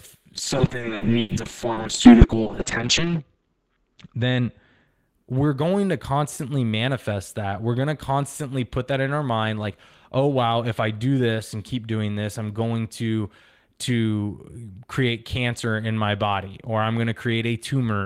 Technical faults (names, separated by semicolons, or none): call bitrate drop